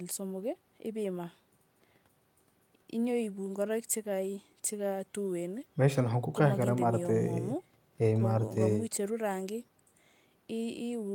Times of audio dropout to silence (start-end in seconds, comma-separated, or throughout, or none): none